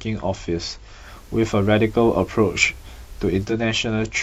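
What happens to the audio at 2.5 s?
The receiver lost its digital signal and blended to the analogue FM broadcast from 0.98 to 3.56 s: hiss rises, and the level shifts by about 2 dB.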